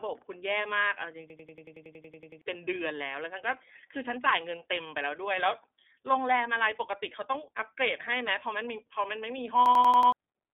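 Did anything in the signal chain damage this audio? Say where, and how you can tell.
Yes. At the codec stage the speech went through iLBC, a narrowband VoIP coder, for the whole clip. The band is cut to roughly 250 Hz to 3.6 kHz, with nothing above 3.7 kHz. Each 30 ms frame has its excitation coded on its own, which leaves the speech plainly rough and slightly synthetic. That grain and band edge fit iLBC's 13.33 kbps, 30 ms mode.

At the driver or buffer stage there are two system hang loops, from 1.30 to 2.42 s and from 9.66 to 10.12 s. The host stalled while the audio hardware kept replaying the same ring buffer. You hear one 92.88 ms slice repeated exactly, 12 times in the first event and 5 in the second. The result is a machine-gun stutter at 10.8 Hz, which fits a 4096-sample buffer. About a second of speech is lost in the first event and about half a second in the second.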